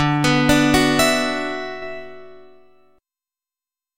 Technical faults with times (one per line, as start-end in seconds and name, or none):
1.82-3.98 sudden gain jump